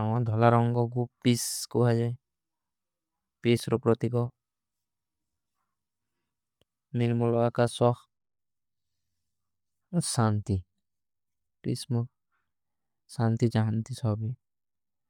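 Bluetooth LC3 compression, the likely cause, runs throughout the speech, with grainy, breathy noise-filled highs from 10 ms frames. On a spectrogram the top shows patchy blocks ending near 20.2 kHz.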